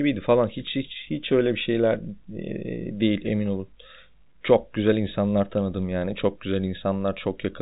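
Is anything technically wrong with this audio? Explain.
No, nothing's wrong here: the speech simply comes through as ordinary telephone-band audio, with everything above about 3.8 kHz absent, just as you'd expect from a G.711 phone line.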